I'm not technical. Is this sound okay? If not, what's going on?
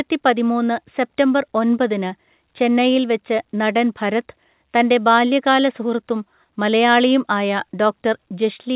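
Yes, nothing in this speech recording points to a problem. It went through an ordinary call connection that carries nothing above about 4 kHz, so it has the narrow, phone-like sound of a normal phone call.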